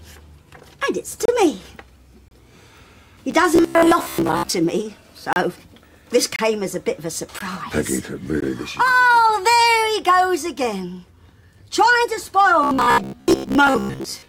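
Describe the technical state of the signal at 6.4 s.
At 6.4 s the sound drops out abruptly for about 28 ms, from 6.36 to 6.39 s, a hard-edged hole of pure silence. This is a gap between stream segments: two segments' timestamps don't quite meet, so the player pads the gap with silence and no audio is lost.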